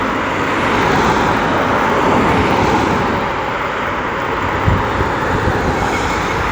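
From start to finish, a block size mismatch (truncated) puts a 100 Hz buzz on the everyday sounds. The tail of each block is dropped, yet pace and pitch stay normal, so little is lost. Unlike mains hum, the buzz comes from repeated block edges rather than a steady tone.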